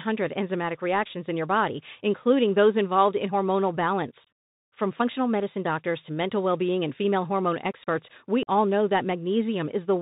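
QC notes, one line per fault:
throughout: Bluetooth CVSD headset codec. The speech is narrowband, with nothing above 4 kHz. The sound fits a 64 kbps CVSD link. That coder sends one bit per sample, saying only up or down, with an adapting step size. Fast, loud high-frequency parts outrun the step and distort. S sounds come out scratchy. A grainy hiss sits under the speech. The damage is plainly audible.
4.24–4.27 s and 8.43–8.49 s: unconcealed Bluetooth headset packet loss. The first gap comes just after "those involved in hormonal". About 26 ms is lost, scattered over 30 ms, with the longest hole about 23 ms. That points to roughly seven short packets dropped. The second comes after "female hormone experts we". About 41 ms is lost, around ten packets. Nothing filled the holes, so the speech drops out with abrupt edges, then resumes.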